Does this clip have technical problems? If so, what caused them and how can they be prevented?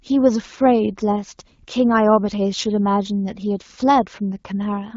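No, nothing here needs fixing: the speech comes over an AMR wideband (HD Voice) path at what sounds like 12.65 kbit/s, a rate at which that codec holds speech clear, so there is nothing to prevent.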